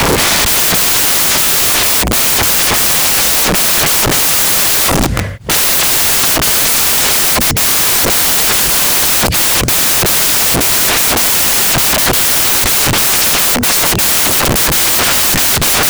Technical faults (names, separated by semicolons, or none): samples built from the wrong bytes